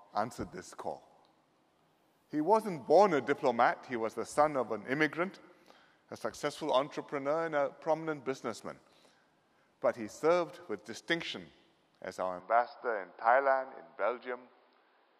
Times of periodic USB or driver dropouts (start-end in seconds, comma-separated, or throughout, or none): none